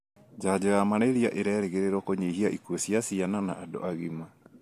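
Nothing in the speech recording points to a technical fault at any point.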